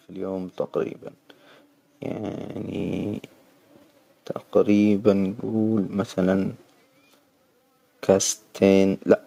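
From 0.05 to 1.03 s, then from 2.11 to 3.31 s, automatic gain rising lifts the level by about 3 dB and then about 5 dB. The gain control judged the input too quiet and ramped up, so voice and background swell together.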